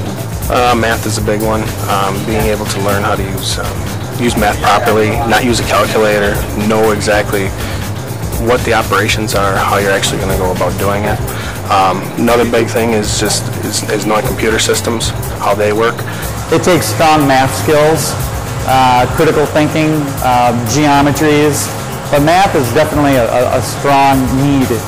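Hard clipping runs through the whole thing. Something in the chain was driven roughly 20 dB past what it could pass, so around a tenth of the waveform gets sliced flat, and those flat tops throw up high harmonics that put a fuzz on every loud stretch of the audio.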